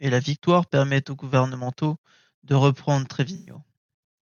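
AAC frame loss with concealment occurs from 3.35 to 3.54 s, just after "aux gouvernementaux de reprendre". About 107 ms of coded audio went missing, which fits a run of around five consecutive frames. The decoder covered the gap by reusing the last good spectrum, randomising its signs or interpolating its energy. The speech there turns smeared, noisy or phasey, before clean decoding resumes.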